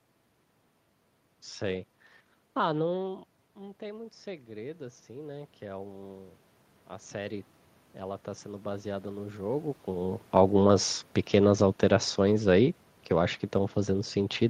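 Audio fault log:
3.02–10.15 s, automatic gain rising. The talker moves back near 3 s, input drops about 13 dB. Gain climbs about 12 dB slowly, swelling room noise too.
10.29–13.45 s, automatic gain falling. The talker moves again near 9.5 s, and the input is too loud or its background too strong for the gain. Gain eases down about 4 dB, sinking the background with it.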